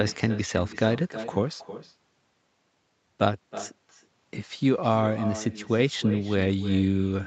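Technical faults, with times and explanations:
Throughout, echo with no canceller: every phrase of speech returns roughly a third of a second later, about 13 dB quieter and thinner, because the far end's loudspeaker feeds its microphone and nothing removes that loop before the audio travels back across the network.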